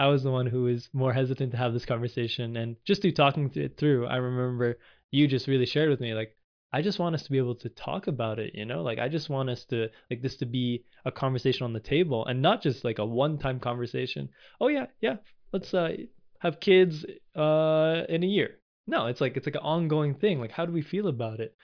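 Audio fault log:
No technical faults can be heard anywhere in this speech recording, and the signal path stays steady throughout.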